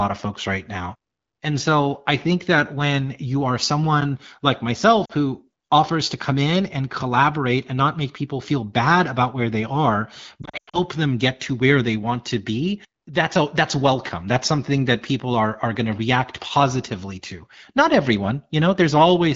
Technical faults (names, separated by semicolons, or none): lost AMR speech frames